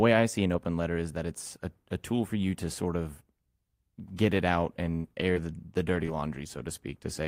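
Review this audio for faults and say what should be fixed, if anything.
Brief ticks and small smeared hiccups break into the speech between 4.95 and 6.60 s, just after "get it out." These are scattered short gaps: about three lost or late packets, the longest near 70 ms, together 120 ms of missing audio that the receiver concealed by stretching the preceding sound. A larger jitter buffer or forward error correction on the link would prevent it.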